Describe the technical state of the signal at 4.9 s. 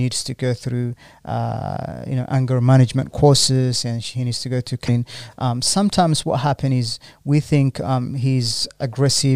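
At 4.85 to 4.89 s, just before the point asked about, the signal has damaged data in a compressed stream. For about 40 ms the decoder is fed corrupted bytes, misreads or discards those frames, and loses sync until it finds a valid frame header again. The result is a short chirp, squawk, click or short hole in the speech. A spectrogram shows a brief vertical break unrelated to the surrounding speech, and the waveform shows an abrupt, jagged discontinuity.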